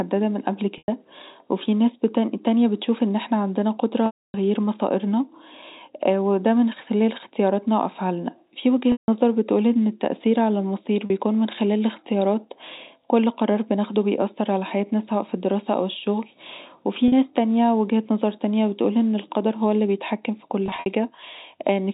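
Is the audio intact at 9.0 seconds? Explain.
No. From 8.92 to 9.08 s, about 160 ms of speech is lost (consistent with eight 20 ms packets) and hidden by packet loss concealment with pitch repetition. The last pitch period is looped into a buzzy held tone, then fades to silence. On a waveform this appears as identical repeating cycles shrinking to flat. On a spectrogram it appears as frozen horizontal harmonics under the 4 kHz telephone ceiling that fade out before the speech resumes.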